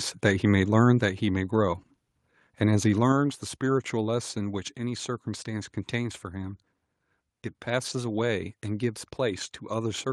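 A speech recording in which, at 1.02 s, the level drops abruptly by about 4 dB, with the voice and background falling together in a single step. That points to a microphone volume stepped down, most likely the call software cutting the device's input volume because it judged the signal too hot. What separates it from automatic gain control riding the level is the suddenness: there is no gradual glide, and the new lower level simply holds.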